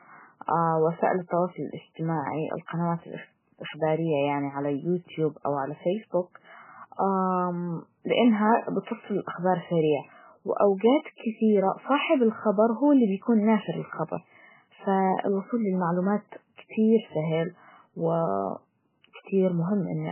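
Throughout this speech recording the sound is dull, watery and swirly, with nothing above 3 kHz and sibilants reduced to metallic chirps. The likely cause is heavy MP3 compression at a very low bitrate, consistent with about 8 kbps, where the encoder cuts the treble and lets weak frequency lines flicker between frames.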